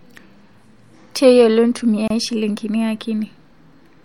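At 2.08 to 2.10 s the speech breaks for about 27.5 ms: a gap at a join of encoded pieces. Two separately encoded segments were joined without trimming, so the encoder's start-up delay and the padding of the last frame both remain as silence. The edges are softened by the codec. Unlike a packet dropout, nothing is lost: the speech resumes exactly where it stopped. The 4 s spacing points to pieces of that length.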